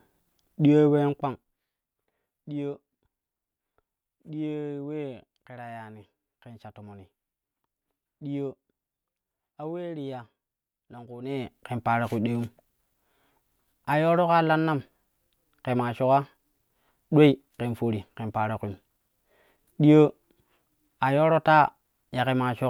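No technical faults can be heard in this speech recording.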